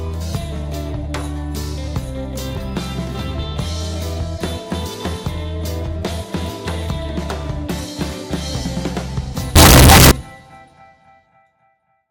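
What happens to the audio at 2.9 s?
Nothing goes wrong at 2.9 s; the audio plays through that moment intact, with no dropout, click or distortion.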